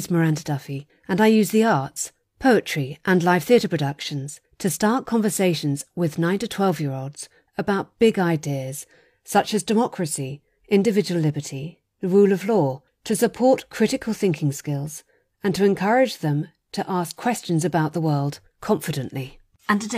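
No technical faults are audible.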